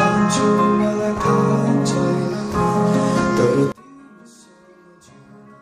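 From 3.72 s to the end, the mono-summed audio drops by about 29 dB to a faint residue, likely one channel inverted cancelling common content.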